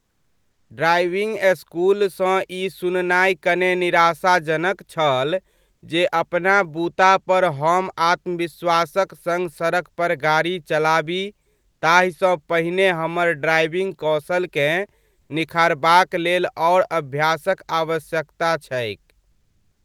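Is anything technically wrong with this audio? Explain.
Yes. Comfort noise in place of the background: at 15.21 to 15.29 s and from 19.31 s to the end, the real background gives way to a flat, featureless hiss, shifting about 6 dB and then about 3 dB. This is likely Opus discontinuous transmission, which stops sending during pauses while the receiver fills them with synthetic noise.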